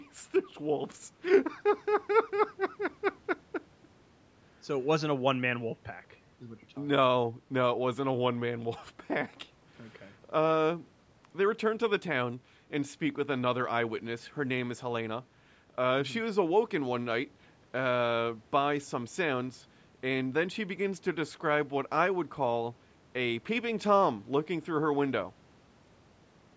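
No technical faults are audible.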